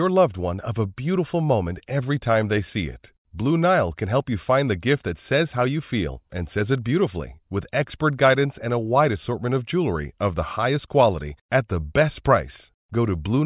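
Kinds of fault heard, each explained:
No kinds of fault are heard in this speech recording.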